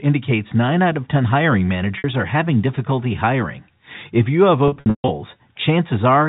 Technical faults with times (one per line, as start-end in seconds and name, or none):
1.98-2.04 packet loss with pitch repetition
4.68-5.08 packet loss with pitch repetition